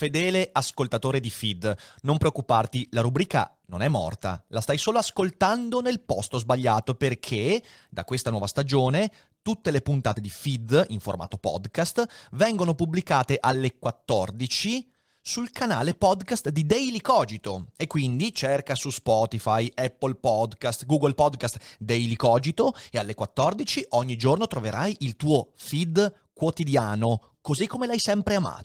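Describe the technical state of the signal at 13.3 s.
At 13.3 s the speech is intact, with no dropout, click or distortion, and only the light, steady coloration of its Opus voice coding.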